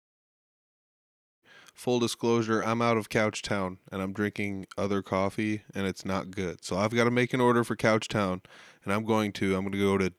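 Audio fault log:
No faults detected.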